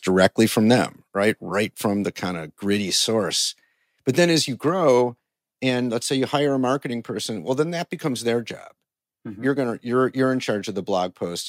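At 0.24 to 0.26 s, before "from them right right", peaks flatten at the converter's limit, likely microphone overload pushing about 2 dB over, so a few percent of samples square off into crackle. Microphone volume stepped down at 1.02 s, after "from them", by about 3 dB, and again at 5.7 s, before "let's say you hire", by about 2 dB. Each is likely an automatic gain cut that shows as a sudden drop in the waveform envelope.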